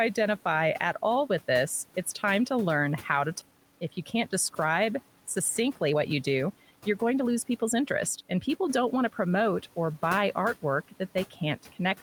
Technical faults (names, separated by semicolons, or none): skip ahead; jitter buffer speed-up; speech cut by the noise suppressor